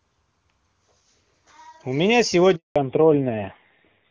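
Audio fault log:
2.56–2.76 s handover gap: the speech fades out within a few tens of milliseconds into 200 ms of silence, because no speech frames arrived while the call switched networks.
2.76–4.11 s fallback to narrowband: after the gap the voice turns dull and rough, with nothing above 4 kHz, as the call drops from HD Voice to a low-rate narrowband codec.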